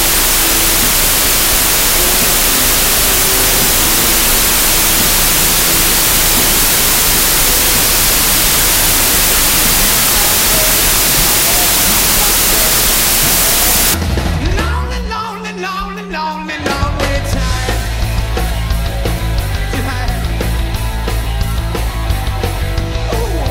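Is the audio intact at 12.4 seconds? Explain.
No. From 0.0 to 13.94 s, 32-bit integer samples are read as 16-bit, a wrong sample width, giving loud noise with the original buried inside, at half speed and lower pitch.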